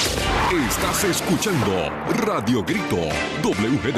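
At 0.90 s there's a compressed frames skipped fault: about one frame's worth of audio, roughly 20 ms, just isn't played, so the sound jumps forward. The step fits a 21.3 ms frame.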